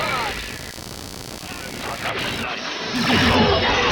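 A short clip carries computer activity noise from start to finish. A buzzing pulse of about 70 per second sits roughly 15 dB below the sound. It follows the computer's workload, not the audio. Processor, graphics or mouse load disturbs the shared ground.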